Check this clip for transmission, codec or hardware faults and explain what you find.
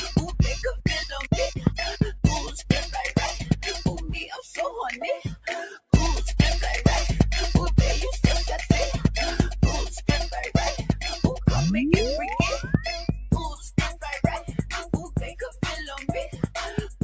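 The clip has two related faults, both from a speech-oriented noise suppressor left active.

Noise suppressor applied to music or sounds, throughout: treating steady content as noise, it swings gain by around 10 dB, so held sounds pump and thin while attacks pass, unlike a compressor's level-driven action.

Sound cut by the noise suppressor at 2.46–2.69 s (about 11 dB), 13.11–13.31 s (about 9 dB), 13.52–14.04 s (about 13 dB), 14.39–15.62 s (about 12 dB), 16.27–16.55 s (about 12 dB) and 16.87 s to the end (about 13 dB). Sustained or decaying material sinks or its tail is chopped, whereas a dropout would silence everything abruptly. The call's microphone processing, with nothing above 8 kHz, sits underneath but is normal.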